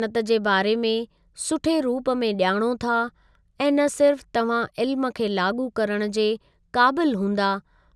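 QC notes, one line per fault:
No fault stood out on listening to this speech recording.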